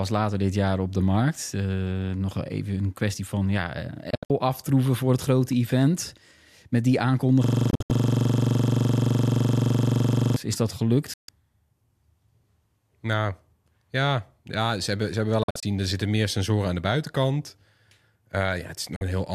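From 4.10 to 4.30 s, just before "aftroeven voor het grote", a digital broadcast dropout mutes the sound in quick 3 ms fades. About 144 ms is lost in short holes spread over 192 ms, the longest 72 ms, which fits several corrupted frames being discarded. The gaps are silent rather than garbled, which separates this from codec glitching.

From 7.44 to 10.36 s, a system hang loop repeats one 42.67 ms slice 68 times. That fits a frozen 2048-sample buffer and gives a rapid stutter at 23.4 Hz. The repetition is exact, unlike the holes of a dropout. A further dropout falls at 7.70 to 7.90 s, after "grote event met die".

More dropouts follow at 11.14 to 11.29 s after "is dat" (144 ms), at 15.43 to 15.63 s (120 ms in holes, the longest 48 ms), and at 18.96 to 19.02 s (48 ms).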